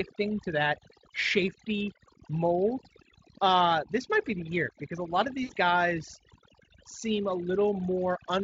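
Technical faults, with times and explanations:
Throughout: overdone noise removal. The background sits near silent, with small twinkling specks. A noise reducer set too strong is pulling single frequency bands down whenever they come close to its noise estimate. Quieter parts of the voice vanish with them.
5.43 to 5.51 s: VoIP packet loss concealed by the speech codec. About 60 ms of audio is missing, which fits three lost 20 ms frames. The Speex decoder stretches its last pitch and filter into a buzzy tone or coloured noise that fades. The voice stays weak briefly afterwards.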